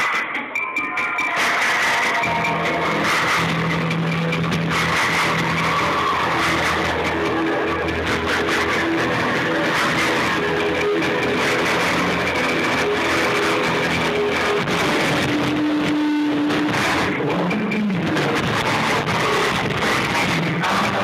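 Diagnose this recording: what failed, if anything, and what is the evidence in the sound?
Nothing stood out on listening that would point to a failure at any stage of the recording or playback chain.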